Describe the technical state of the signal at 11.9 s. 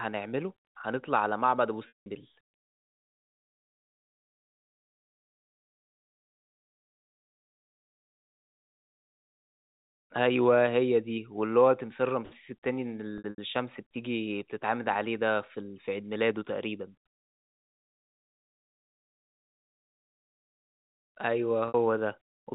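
At 11.9 s the speech is intact, carried through the G.711 telephone coding at its usual 4 kHz band limit with no fault present.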